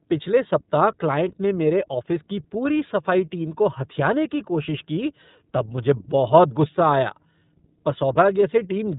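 From start to finish the speech sounds boxed-in and thin, with no air or sibilant sparkle, and it carries a plainly audible rough, slightly buzzy, synthetic edge. This is iLBC codec damage. The audio is band-limited to narrowband telephone quality, with nothing above 3.8 kHz. Because each short frame's excitation is coded independently, the texture is grainy. This fits 30 ms frames at roughly 13 kbps, the codec's lower-rate mode.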